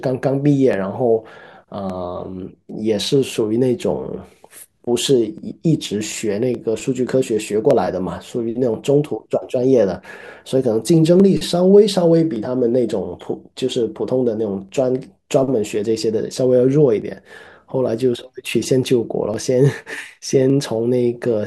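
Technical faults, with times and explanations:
0.73 to 20.50 s, clock drift buffer slips: through the speech there's a click roughly every 1.16 s, about twenty in all, evenly spaced like a metronome. That regularity points to two devices likely running on separate clocks that disagree by something like 500 ppm, so the buffer between them creeps toward full or empty and then jumps, dropping or repeating a block of a few dozen samples. Each jump breaks the waveform, which is the tick you hear.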